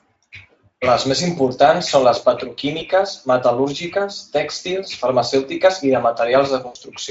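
At 2.79 to 2.86 s, just after "més importants són les", VoIP packet loss concealed by the speech codec replaces about 20 ms of lost audio with an extrapolated stretch, buzzy or noise-like, that fades. At 6.67 to 6.77 s a longer gap, consistent with four lost frames, decays into weakened, coloured sound over the light Speex coding.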